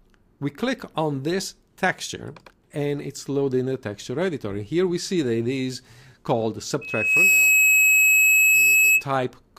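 From 6.81 to 9.04 s, a loudspeaker feedback squeal rises. A 2.6 kHz tone swells over about half a second, ending roughly 10 dB above the sound.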